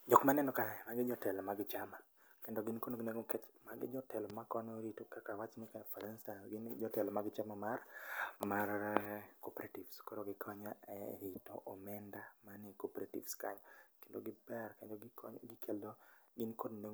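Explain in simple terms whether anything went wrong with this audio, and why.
A loud pop happens at 4.30 to 4.32 seconds: one short, sharp burst that jumps well above the speech, which carries on underneath. It was likely caused by a sudden electrical jolt, such as a plug, switch or static discharge, that landed on the signal.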